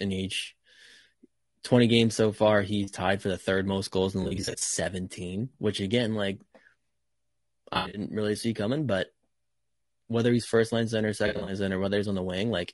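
The speech runs through what is likely low-delay AAC compression (AAC-ELD), at a quality that points to around 32 kbps. Its short frames resolve pitch harmonics poorly, so the voice sounds rough and grainy throughout, with noise filling the gaps between harmonics. AAC frame loss with concealment also occurs, where the decoder rebuilds missing frames from the last good spectrum. Short scattered losses leave smeared, noisy patches at 4.23–4.68 s after "most goals in the", at 7.73–8.01 s before "really see coming but", and at 11.27–11.53 s after "he's first line center".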